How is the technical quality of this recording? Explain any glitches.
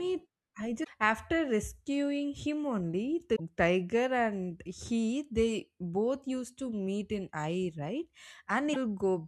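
The recording has three brief glitches, at 0.83–0.88 s (just before "after rescuing him only"), at 3.35–3.40 s (just before "tiger and he they") and at 8.73–8.77 s. Each is a likely broken MP3 bit reservoir. After missing frames, the decoder borrows data from the wrong bytes, so the speech skips ahead through a corrupted break roughly two 24 ms frames long. A simple dropout would differ, giving clean silence without the forward jump.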